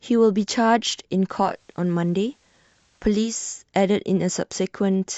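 Digital radio blending to analogue, 1.41 to 3.40 s: the receiver lost its digital stream and cross-faded in 207 ms to FM, bringing faint hiss and dropping level about 1 dB.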